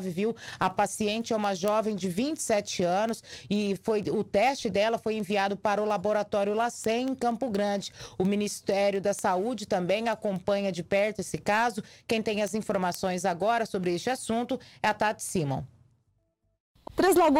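From about 0.27 s right through to 17.17 s there's a steady run of word clock ticks, around seventy of them, landing roughly every fifth of a second. It sounds like the digital link was read by a device on its own free-running clock, drifting something like 100 ppm from the sender. Each time the two clocks slip past each other, a single sample gets dropped or doubled, and that discontinuity pops out as a sharp tick.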